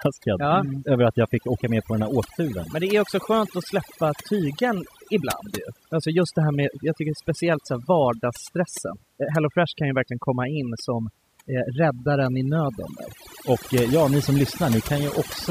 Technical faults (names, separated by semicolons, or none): overdone noise removal